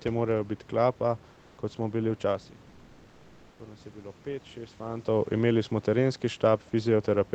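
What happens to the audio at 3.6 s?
At about 3.59 s the automatic gain control starts rising. The level reaching the microphone had dropped by about 16 dB, as if the talker eased away, so the AGC slowly turned its gain up to compensate, by about 4 dB, finishing around 5.08 s. You hear voice and room noise swell together over that 1.5 s. It only claws back part of the drop, so the voice still sits lower than before.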